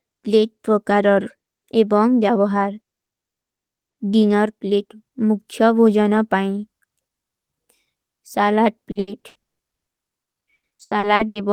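From 8.91 s to 11.38 s the speech breaks into repeated packet loss with a robotic sound. Nearly twenty short holes, the longest 120 ms, get patched by stretching the last bit of sound, so roughly half that stretch is filler and comes across as choppy.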